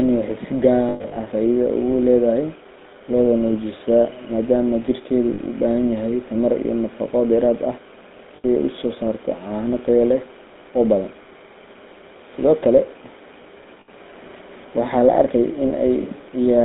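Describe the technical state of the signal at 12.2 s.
At 12.2 s the speech has a buzzy, gravelly roughness and a narrow band running from about 200 Hz to 3.7 kHz. This is GSM full-rate codec damage, present throughout, consistent with 13 kbps coding that rebuilds speech from a vocal-tract model fed sparse, regularly spaced pulses.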